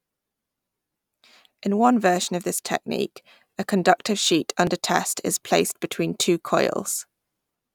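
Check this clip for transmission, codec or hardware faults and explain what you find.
One fault is present. At 4.67 s the speech jumps ahead by about 20 ms, likely a dropped buffer (overrun): samples were overwritten before being read, and the two sides were spliced directly together.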